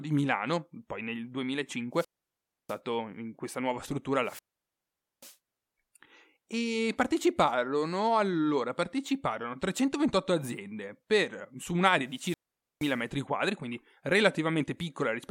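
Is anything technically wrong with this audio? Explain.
Yes. This speech clip has three wireless microphone squelch dropouts, each a rise of hiss, then near silence, then the voice returning. They run 1.93 to 2.79 s, before "in questa nuova struttura", 4.22 to 5.37 s, after it, and 12.08 to 13.05 s, between "aziende per su un'area" and "quadri quindi". The mutes last about 650, 840 and 470 ms. Each time the radio signal fades and the receiver's squelch cuts the output.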